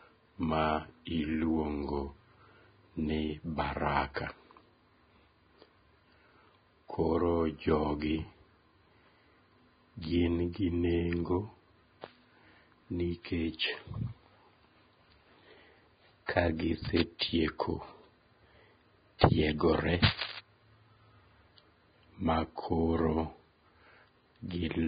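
Throughout, the speech carries heavy damage from what is likely Vorbis compression. Nothing is heard above 4.9 kHz. The treble that remains is coarsely quantised, so fine detail turns into hiss and grain. Tones sound rough and attacks are blurred. The result fits a bitrate around 16 kbps.

At 4.14 to 4.16 s there is pre-echo. A short hiss, about 24 ms long, runs just ahead of a sharp attack. The codec spread its noise across a whole block, so the quiet moment before the onset is filled too. The attack sounds smeared.

From 16.85 to 17.02 s comes cable scratch noise, likely from a worn cable, connector or control being moved. Its contact resistance changes fast, adding dense, uneven bursts of noise. They sit a little below the speech level and sound like scratching over it.

At 17.19 to 17.21 s a second pre-echo appears, about 23 ms of hiss smeared in front of an attack. The mechanism is the same: block-wide quantisation noise leaks into the quiet gap.

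From 20.03 to 20.39 s the cable scratch noise returns. This burst is longer, at about 0.36 s. It is roughly as loud as the speech itself. It is heard as rustling and scratching laid over the sound.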